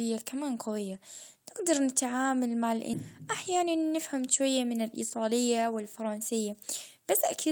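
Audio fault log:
2.93–2.95 s, skip ahead: about a second and a half of speech is dropped. Playback jumps straight to later audio with no gap or fill.
3.27–5.80 s, jitter buffer speed-up: speech runs at 112% speed, same pitch. Short pitch-period pieces were cut, roughly a third of a second in total, so it sounds hurried.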